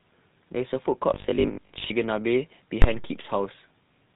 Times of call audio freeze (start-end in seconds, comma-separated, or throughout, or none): none